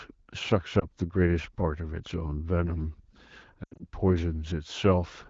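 At 0.79 s, a lost AMR speech frame causes a brief dip. From 3.63 to 3.86 s, scattered lost frames let the decoder's concealment fade the sound toward near silence before it returns rough.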